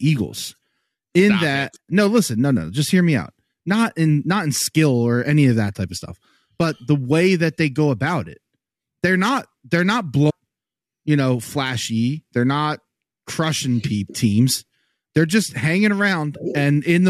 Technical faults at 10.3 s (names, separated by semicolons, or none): stream segment skipped